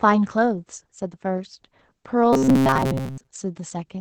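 A speech clip that has passed through Opus voice compression at 12 kbps, coded by the SILK linear-prediction layer in wideband mode with 20 ms frames. At that rate the coder spends few bits on the excitation and caps the band, so nothing sounds above about 8 kHz and the codec damage is plainly audible throughout: the speech is muffled and hoarse, with a faintly synthetic edge. From 2.33 to 3.27 s there is robotic sound from repeated short buffers, likely caused by playback starving for new audio and looping a tiny recent slice instead. A rigid metallic buzz at 133 Hz sets in, which fits a repeated segment of about 7.5 ms. Roughly 70 percent of that stretch is recycled rather than fresh, so the speech keeps only its rough contour under the fixed drone.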